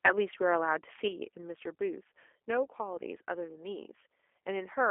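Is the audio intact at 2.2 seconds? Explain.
No. G.729 codec coding runs throughout, rebuilding speech from filter and pulse models at 8 kbit/s, so 2.2 s sounds rough and synthetic, with the spectrogram empty above 3.4 kHz.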